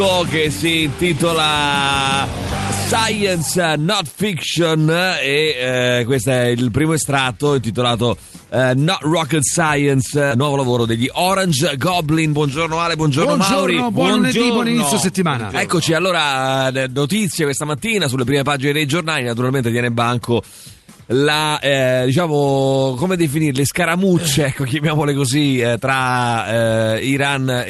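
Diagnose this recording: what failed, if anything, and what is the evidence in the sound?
The skip ahead, at the network and jitter buffer stage, comes at 10.31 to 10.42 s. Playback jumps forward with no audible gap, and roughly 0.7 s of audio never plays. A backlog of late audio was discarded, and the two sides of the missing stretch join almost directly.

A jitter buffer speed-up follows, from 10.86 to 11.78 s at 106% and from 12.26 to 13.68 s at 107%. The sound runs slightly hurried at unchanged pitch. The buffer trimmed pitch-period-sized pieces repeatedly, shedding roughly 70 ms and 100 ms in total, to bring excess delay down.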